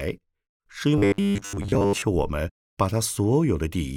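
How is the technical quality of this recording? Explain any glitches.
The recording has one clear glitch, robotic sound from repeated short buffers, from 0.98 s to 2.02 s. The speech turns into a rigid metallic buzz that still loosely tracks the words. The likely cause is audio arriving too seldom, so playback keeps looping the most recent 10 ms slice and skips most of the real audio in between. Those repeats impose a fixed 100 Hz pitch, which sets it apart from codec warble or flanging, whose tone drifts rather than holding one steady drone.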